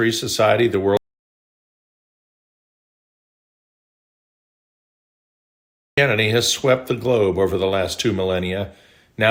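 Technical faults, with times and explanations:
0.97–5.98 s, audio dropout to silence: The speech cuts out into dead digital silence, with no room tone, for about 5 s. A lost input feeding zeros is the likely cause.
6.58 s and 8.60–8.63 s, repeated frames: Brief stutters replay a 10 ms slice, then a 20 ms slice. Each repeat slightly lengthens the audio.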